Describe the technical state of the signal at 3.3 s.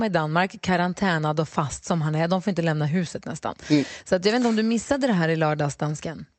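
At 3.3 s the speech is intact, with no dropout, glitch or other fault, only the 8 kHz band limit of the call path it travelled through.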